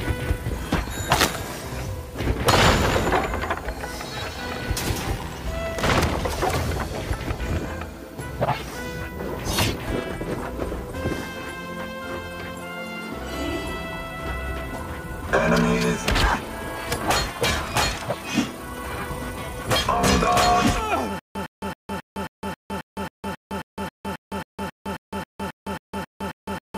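From 21.19 s to the end, stutter with silent gaps: a 109 ms burst recurs every 270 ms, likely stalled playback replaying its last fragment.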